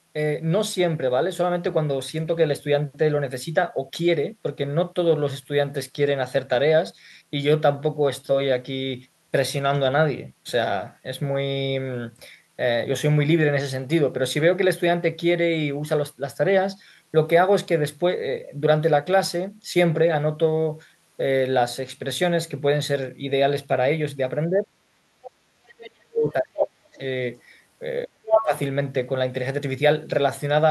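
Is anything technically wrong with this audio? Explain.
Yes. Near the end of the speech, two related echo-cancellation faults appear.

Speech suppressed in double talk occurs at 24.48–24.7 s, 25.03–26.96 s and 28.06–28.53 s, with the talker dipping by up to roughly 20, 40 and 25 dB. The likely cause is the canceller failing to separate the talker from overlapping loudspeaker echo and turning both down.

The other side's voice leaking through appears at 26.61–26.65 s and 28.27–28.46 s, likely residual loudspeaker echo the canceller missed. The first scrap sits a little below the talker's level, the second slightly above it. It is a separate voice, not room reverberation trailing the talker.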